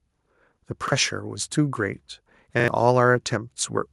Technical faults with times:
0.88-0.92 repeated buffer
2.60-2.68 repeated buffer

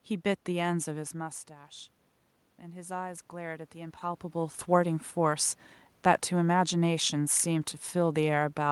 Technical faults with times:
2.60-4.96 automatic gain rising

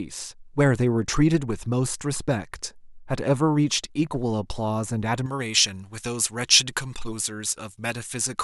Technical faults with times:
5.26-8.43 pre-emphasis left on

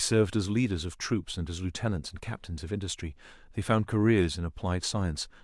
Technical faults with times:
none

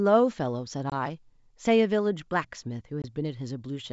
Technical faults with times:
0.90-0.93 packet loss on an ADPCM call
3.02-3.05 packet loss on an ADPCM call

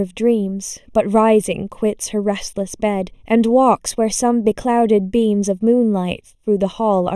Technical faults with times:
0.00-7.16 channel delay (comb filtering)

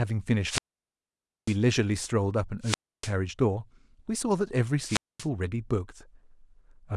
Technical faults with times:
0.42-1.58 wireless microphone squelch dropout
2.61-3.12 wireless microphone squelch dropout
4.83-5.27 wireless microphone squelch dropout

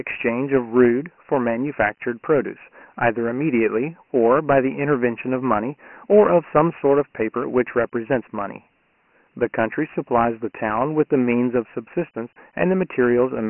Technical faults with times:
0.00-13.49 Dialogic VOX ADPCM

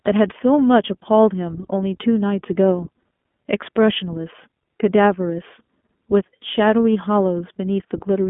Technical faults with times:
0.00-8.30 iLBC codec

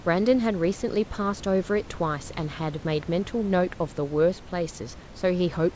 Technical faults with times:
none

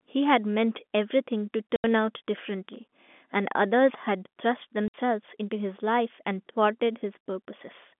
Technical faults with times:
1.76-1.84 packet loss filled with silence
4.88-4.94 packet loss filled with silence

